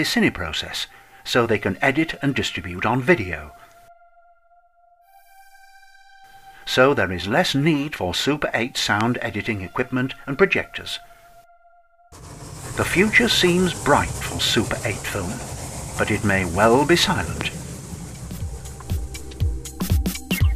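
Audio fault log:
9.01–9.03 s and 17.41–17.43 s, loud pop: single sharp pops about 20 dB, then 15 dB, above the sound, which continues beneath, likely from a sudden voltage step entering the signal.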